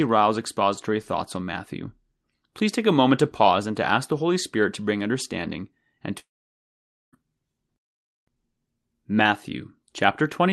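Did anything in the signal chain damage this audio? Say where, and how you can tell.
Yes, at the network stage. Right after "to bring understanding and", from 6.19 to 7.15 s, the sound smears into a brief fading buzz, drops to near silence, then resumes with about 0.94 s simply gone. That's likely a long network dropout outlasting the receiver's concealment.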